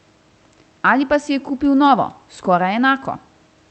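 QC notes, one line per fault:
No faults: the speech carries over a call path whose top end stops at 8 kHz, which fits Opus at around 40 kbps, with the room's background noise sitting about 39 dB below it.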